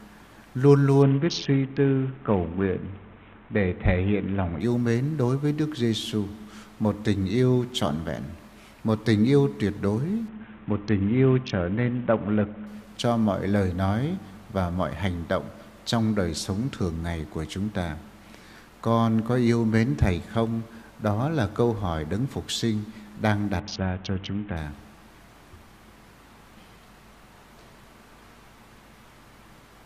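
From 1.02 to 4.61 s, 10.28 to 12.67 s and 23.60 to 24.57 s the treble goes dull and a gritty, grainy noise rises, clearing each time the rate recovers. This is a Bluetooth SBC bit pool drop: the congested link forced the encoder to starve its top sub-bands and quantise the rest coarsely. The sound fits a fall from a bit pool of 28 to about 5, near 54 kbps.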